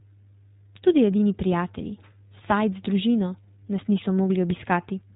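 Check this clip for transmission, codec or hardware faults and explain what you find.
One codec fault runs through the whole speech clip: iLBC coding. The band stops at 4 kHz, and the voice has a plainly audible rough, slightly synthetic grain. It fits iLBC's 20 ms mode at 15.2 kbps, which codes each frame's excitation independently. A plain low-pass or telephone band limit would cut the top just as sharply but leave the voice smooth; here the texture itself is degraded.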